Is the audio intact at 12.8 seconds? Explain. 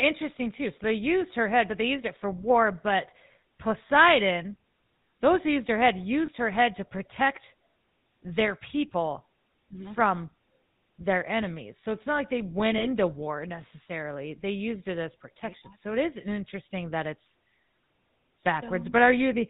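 No, there's a dropout there. Between about 12.78 and 12.86 s, right after "not like they went" and before "war necessarily", you get lost GSM frames. The decoder had no good data for a short stretch, which points to a single lost 20 ms frame, so it reused the settings of the last good frame. That comes through as a brief rough, metallic ring.

The whole clip, including this moment, also carries the GSM full-rate codec sound. It's a buzzy, gravelly roughness that's plainly audible, with nothing above 4 kHz, consistent with a 13 kbps GSM stream. The codec models the vocal tract and drives it with a coarse, regularly spaced pulse train, which is where that grainy texture comes from.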